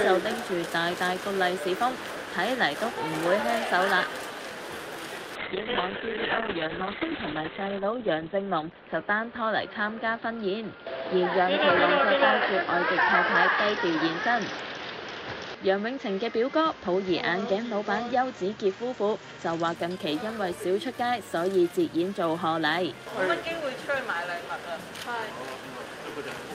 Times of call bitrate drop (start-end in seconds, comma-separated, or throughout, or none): 5.37-19.81